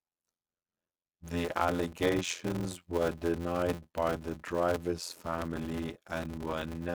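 All the way through, there's a block size mismatch with zero padding: short blocks get filled out, likely to 512 samples, giving a steady 86.1 Hz buzz and speech running at 0.625 speed, timbre unchanged.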